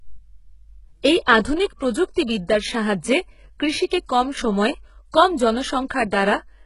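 Throughout the speech, the treble appears to be synthesized rather than coded: the likely cause is HE-AAC compression, which keeps only the lower spectrum and fills the top by copying lower bands upward under a coarse envelope. The damage is heavy, in keeping with a very low bitrate near 12 kbps. Nothing sounds above 11.1 kHz, and the rebuilt band above the crossover doesn't match the real harmonics, so sibilants come out gritty, metallic and lisped.

Pre-echo occurs twice. At 1.26 s, a sharp onset lands late in a transform block, so quantisation noise sized for the loud attack spreads into the silence just before it, leaving a short hiss about 10 ms ahead. From 3.87 to 3.91 s the same effect spreads wider, about 47 ms, so an audible smear of noise leads into the attack and softens its edge.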